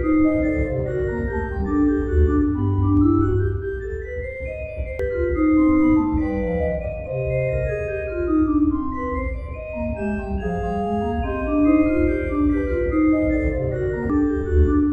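At 4.99 s, compressed frames are skipped. Roughly half a second of audio vanishes, about seven frames of 92.9 ms. The decoder never plays them.

At 12.35 s, a single sharp click cuts through. The waveform jumps straight to a later value. The likely cause is dropped samples, about two of them. Nothing audible is lost.

At 14.10 s, frames are skipped again. About five frames go missing, again roughly half a second.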